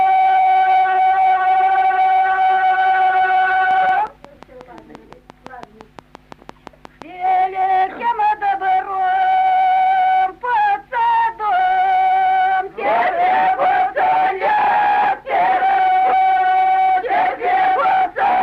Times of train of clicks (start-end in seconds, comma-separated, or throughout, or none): 3.71-7.03